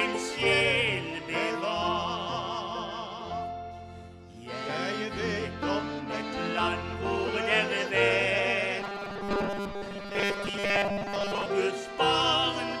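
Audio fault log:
8.80 to 11.46 s: robotic sound from repeated short buffers. The sound becomes a rigid, metallic buzz at a fixed 200 Hz that only loosely tracks the underlying material. The likely cause is that fresh audio arrived too slowly, so playback kept looping the last short block, about 5 ms long to match the 200 Hz buzz, while most of the real audio in this stretch was dropped. The steady loop rate imposes that constant pitch.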